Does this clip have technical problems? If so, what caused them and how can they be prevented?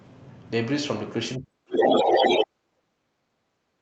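Yes. From 1.38 s to the end of the clip, the talker's speech is pulled down hard, at its deepest by roughly 40 dB, so it dips and breaks up rather than fading smoothly. This is speech suppressed in double talk. Both ends were likely talking at once, and the echo canceller, unable to separate the local talker from the loudspeaker echo, attenuated everything it picked up. A canceller with better double-talk detection, or a headset in place of an open loudspeaker, would prevent it.

Between 1.72 s and 2.44 s, a second voice comes through, somewhat louder than the talker. The audio crossed a wideband Opus call path with its top end near 8 kHz. This is the other side's voice leaking through. The far end was likely played on a loudspeaker, and the echo canceller failed to remove all of it from the microphone signal before sending. Headphones, lower playback volume or a better-adapted echo canceller would keep that leak out.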